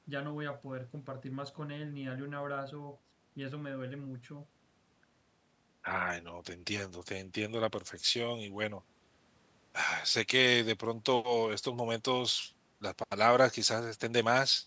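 A speech clip that passed through call microphone processing, so nothing reaches above 8 kHz. The fault is word clock ticks. Sharp little clicks run from 0.30 s to 14.23 s, about one every half second, around thirty in all. Each disturbs a single sample. Two digital devices are running on separate clocks that never lock. They drift apart by something like 40 parts per million. Each time they slip, a sample is dropped or repeated, and a tick is heard.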